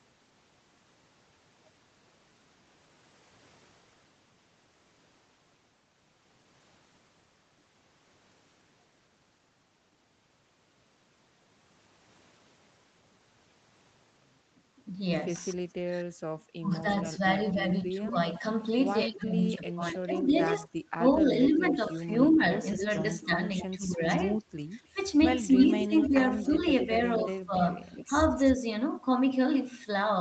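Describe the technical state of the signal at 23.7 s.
At 23.7 s two faults overlap. The first is speech suppressed in double talk, running from 15.53 to 24.02 s. The talker's level dips and breaks up in pieces, adding up to roughly four seconds of affected sound, with the deepest drops around 25 dB. The likely cause is an echo canceller that could not tell the near talker from loudspeaker echo while both sides spoke, so it turned everything down. What sets it apart from ordinary dropouts or codec gaps is that the speech is turned down or cut out by the echo canceller rather than lost in transmission.

The second is an echo leak from 22.77 to 23.88 s. A faint delayed copy of the voice sits about 15 dB below the speech, arriving 274 ms after the original. It is likely residual loudspeaker pickup that the loudspeaker side's echo canceller failed to remove and sent back. Unlike the suppression, which takes sound away, this adds a trailing duplicate at a fixed delay, still limited to the same 8 kHz band as the rest of the call audio.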